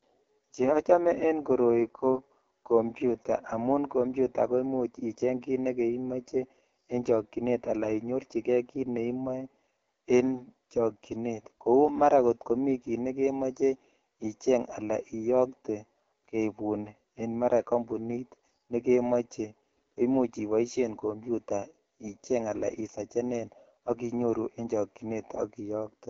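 Speech passed through the AMR wideband (HD Voice) codec at a low rate, likely around 8.85 kbit/s, giving a plainly rough, raspy voice throughout, with nothing above 7.5 kHz.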